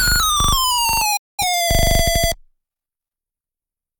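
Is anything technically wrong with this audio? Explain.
Yes. A digital broadcast dropout occurs from 1.17 to 1.45 s. The receiver lost good frames and muted until valid ones returned. The sound fades out over 8 ms, then goes silent. About 213 ms of programme is lost, which fits five dropped frames.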